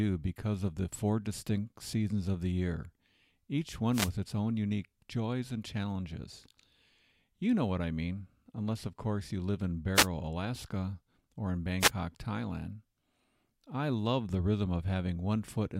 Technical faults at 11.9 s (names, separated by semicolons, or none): wireless microphone noise hit